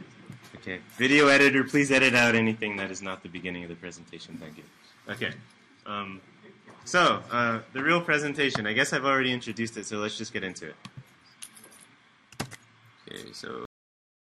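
At 13.65 s the audio has a cut-off end. The sound stops partway through, as if the final buffers were never written to the file or sent to the output, and for the remaining 0.74 s the track sits in flat digital silence. Unlike a fade-out or a natural ending, there is no decay, reverb tail or gradual drop in level. The sound simply disappears at full level in the middle of what it was doing.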